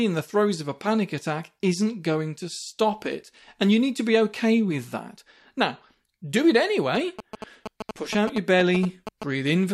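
From 6.95 s to 9.24 s, just after "do it", GSM signalling bursts intrude. A nearby 2G phone's radio pulses are rectified into galloping ticks and brief 217 Hz buzzes about 10 dB under the speech. Unlike steady mains hum, they arrive in stuttering clusters.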